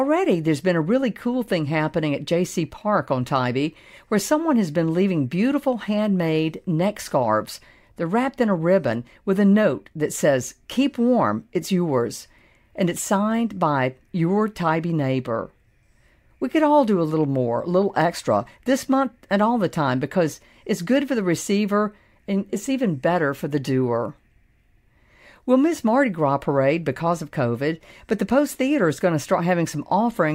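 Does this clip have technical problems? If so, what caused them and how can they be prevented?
No, no technical faults here.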